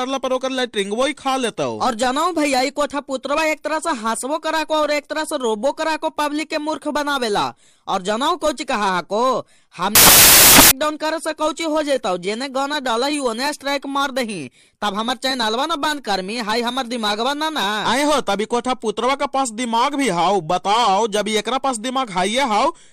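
From 9.95 to 10.71 s the samples are built from the wrong bytes: the reader misassembles each sample, so the rapidly changing low bits land in the high positions. The result is loud, harsh broadband noise, a dense waveform block and flat broadband smear across the spectrogram.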